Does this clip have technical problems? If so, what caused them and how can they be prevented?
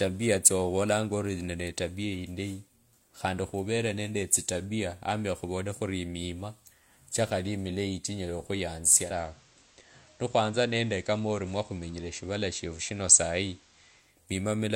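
Yes. From about 8.99 s to 14.17 s the receiver does a digital radio blend to analogue: it loses the digital stream and cross-fades over about 213 ms to the station's FM signal, then fades back at the end. During that stretch the level drops by about 1 dB, and hiss sits roughly 30 dB under the speech. Better reception, or disabling blend on a fixed install, would prevent it.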